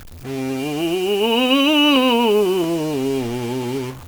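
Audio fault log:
Throughout: stuck bit. The music carries a distortion that rides on the waveform the whole way through. One data bit is likely held fixed at 0 or 1 by a broken line or converter. Roughly half the sample values then land off by that bit's weight, following the shape of the signal. Quiet passages also fill with noise, because the fixed bit flips the result as small values cross zero.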